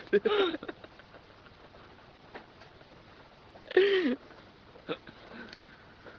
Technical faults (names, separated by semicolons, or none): short stall from a late packet; call audio freeze